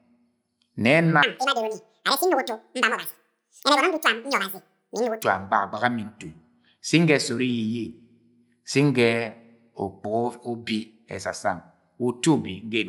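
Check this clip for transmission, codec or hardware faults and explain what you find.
One fault is present: a wrong sample rate between 1.23 and 5.23 s. The speech plays twice as fast and an octave higher, which fits 24 kHz audio played at 48 kHz without conversion. On a spectrogram, harmonics and formants jump up twofold, and the waveform looks squeezed horizontally.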